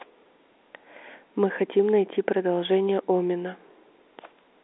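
Nothing goes wrong anywhere in this bit of speech, which simply has the narrow, boxed-in sound of an ordinary G.711 A-law phone line, with everything sitting between 300 Hz and 3.7 kHz and nothing coming through above 3.8 kHz.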